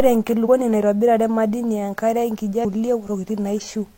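At 0.42 s and again at 2.60 s the speech breaks into a short glitch, about 60 ms and 50 ms long. Both come from damaged data in the compressed stream. A stretch of the encoded bytes is wrong, so the decoder can't make sense of those frames and spits out garbage while it hunts for the next valid frame header to lock back on.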